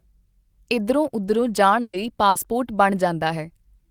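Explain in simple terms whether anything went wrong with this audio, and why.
Burst of packet loss at 1.81 s and 2.29 s: chunks of about 120 ms and 60 ms never arrived, so the last sound was stretched and faded, then the speech jumped ahead.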